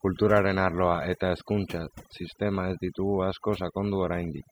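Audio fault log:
Throughout: overdone noise removal. The noise reduction was pushed far too hard on a noisy speech recording, so any frequency band sitting near the tool's idea of the noise floor gets pulled way down or cut entirely. Trouble is, the quieter parts of the voice live down there too, so they get stripped along with the noise. That's why the gaps sound almost dead apart from little twinkly specks.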